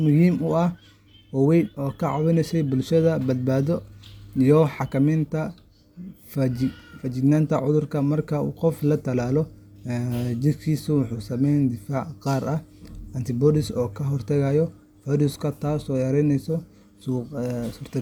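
A speech recording with no technical faults to report. Nothing in it calls for a time or a cause.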